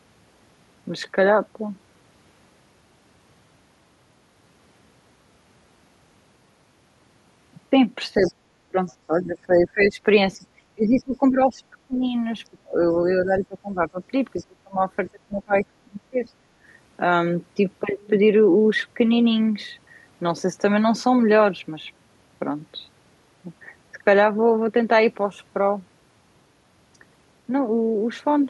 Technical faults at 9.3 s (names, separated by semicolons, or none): speech suppressed in double talk